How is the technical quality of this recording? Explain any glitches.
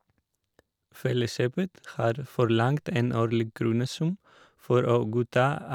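The technical quality of this recording is sound, with no glitches to explain.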